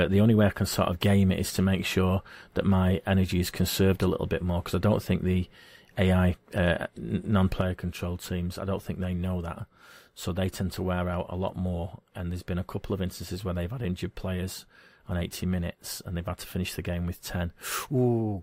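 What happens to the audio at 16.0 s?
At 16.0 s the speech is still inside a level drop that began abruptly at 7.61 s and lasts to the end of the clip: everything sits about 6 dB lower than before. The likely cause is one channel dropping out, so the mono sum carries only half of the shared signal, and anything present on the lost side alone disappears. The sudden step sets it apart from a gradual fade.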